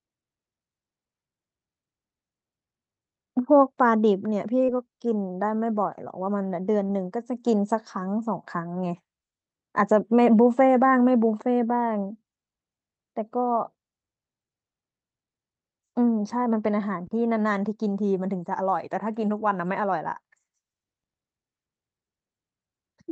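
At 4.65 to 4.78 s and 6.87 to 6.91 s, short concealed packet loss leaves brief smears or wobbles where about 20 ms of audio never arrived and the receiver extrapolated the preceding sound, adding a little extra time in the first instance. Unlike a hard dropout, the hole is filled rather than silent.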